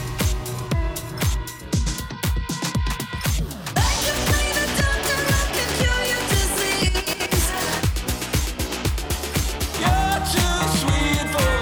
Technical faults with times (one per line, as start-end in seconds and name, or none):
none